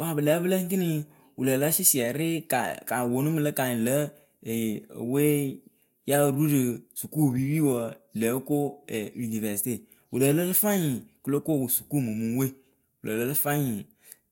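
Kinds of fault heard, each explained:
Nothing in this speech clip comes across as a technical fault; it just sounds the way you'd expect a straightforward recording to sound.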